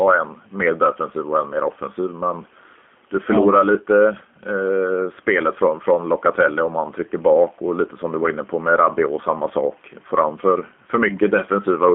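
Throughout the speech, the gain swings by around 5 dB, pulling down under each loud syllable. That gain pumping is likely caused by excessive input gain driving a fast limiter. Unlike a noise gate, the floor never cuts out. The room noise sits about 41 dB below the speech.

Also throughout, the G.729 codec confines everything to roughly 200 Hz to 3.4 kHz and adds a rough, synthetic buzz to the speech, which fits an 8 kbit/s CELP coder. A plain band-limited line would sound dull but stay smooth and natural.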